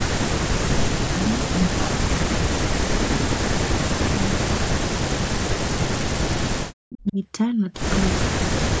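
Speech suppressed in double talk, likely from an echo canceller unable to tell this talker from loudspeaker echo while both sides spoke, pulls the speech down by as much as about 40 dB, gapping it at 0.19–1.35, 1.54–3.6, 4.14–5.85, 6.29–6.38, 6.57–7.18, 8.11–8.28 and 8.44–8.8 s. Inside the 6.57 s dip, from 7.07 to 7.12 s, an echo leak, likely residual loudspeaker pickup the canceller missed, returns a faint copy of the speech delayed by 336 ms and about 20 dB down.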